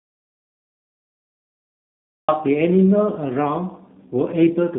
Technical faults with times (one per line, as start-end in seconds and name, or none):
0.00-4.78 G.729 codec
0.00-2.28 audio dropout to silence